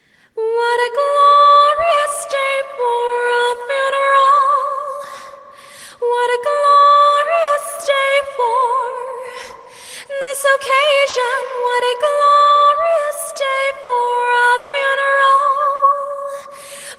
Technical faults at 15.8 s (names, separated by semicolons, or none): short concealed packet loss